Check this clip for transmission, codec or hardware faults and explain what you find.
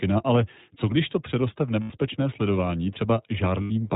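The speech runs through the iLBC codec for the whole clip, with two short stretches of lost iLBC frames.

iLBC codec, throughout: a narrowband coder rebuilds each 20 ms frame independently, consistent with the 15.2 kbps mode. Nothing above 4 kHz survives, and the speech sounds plainly rough and synthetic.

Lost iLBC frames, 1.82 to 1.92 s (just after "když to přeroste v") and 3.62 to 3.71 s: about 80 ms of packets went missing in each, which fits four frames. The decoder looped the last pitch cycle mixed with noise, giving a brief held, buzzy vowel. The speech then recovers almost immediately.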